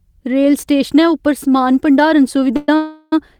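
At 2.56 s the speech stalls for about 0.12 s, then again at 2.76 s for about 0.36 s: a call audio freeze, with the last sound smeared into a fading buzz. Likely delayed packets draining the jitter buffer; speech resumes where it stopped, nothing lost, just later.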